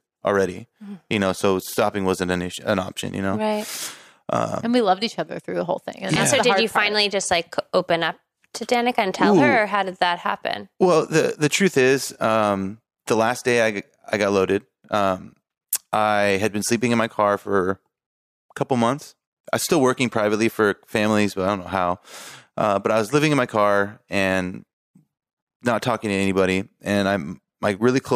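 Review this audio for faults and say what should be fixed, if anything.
Nothing stood out on listening to this speech recording, so there is nothing to fix.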